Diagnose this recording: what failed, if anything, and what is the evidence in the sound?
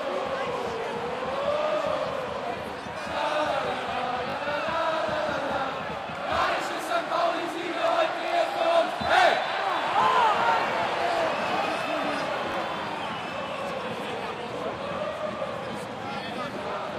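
Repeated buffer at the driver or buffer stage. A 20 ms chunk replays with hard joins at 0.82–0.84, 4.30–4.34, 6.42–6.44, 8.28–8.32, 11.18–11.20, 12.52–12.54 and 14.96–14.98 s. It replays twice at 4.30 and 8.28, and once elsewhere. New audio arrived late, so the last buffer played again.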